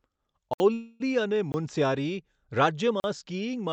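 At 0.54 s the speech drops into a block of digital silence about 65 ms long. A run of samples has been set to zero, probably because the output buffer wasn't filled in time, so the sound stops dead and restarts with no fade around a short hole. From 0.73 to 1.02 s comes a call audio freeze, likely from delayed packets emptying the jitter buffer. The receiver fills about 266 ms by stretching the last sound into a fading buzz rather than going silent, then carries on where it stopped with nothing lost. That smeared, tonal fill is what separates it from the hard-edged dropouts. Shorter blocks of digital silence follow at 1.52 s, lasting 20 ms, and at 3.00 s, lasting 40 ms. The audio is band-limited around 8 kHz, consistent with an Opus call path at a moderate bitrate.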